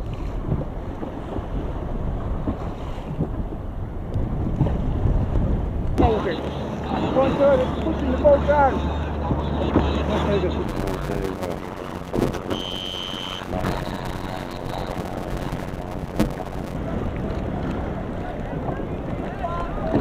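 From 10.64 to 16.75 s, a block size mismatch (padded) zero-fills each short block, fitting 256-sample writes. This produces a 91.9 Hz buzz and 0.533× speed at normal pitch, unlike resampling slowdowns.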